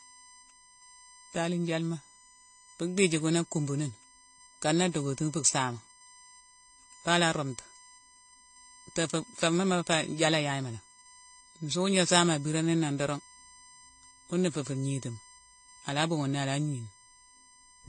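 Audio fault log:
throughout USB whine: a steady, fixed-pitch whine sits under the speech, built on a 1 kHz fundamental with harmonics at every multiple. The 18 kHz harmonic is the strongest, at roughly 20 dB below the signal. The USB bus polls in 1 ms frames, and that periodic current draw leaks through power or ground into the audio path. On a spectrogram it shows as thin horizontal lines at 1 kHz spacing, with the brightest line at 18 kHz.
throughout transcoding between lossy codecs: the speech is band-limited, with nothing above 9.9 kHz, and carries a layered, smeared coding texture rather than one clean set of artefacts. The likely cause is a chain of two lossy encodes, and the sound fits AAC-LC followed by HE-AAC, each at around 32 kbit/s. The second encoder spends its scarce bits reproducing the first encoder's artefacts while adding its own, and the lower cut-off carries through. 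On a spectrogram the speech energy stops at a hard, flat ceiling near 9.9 kHz.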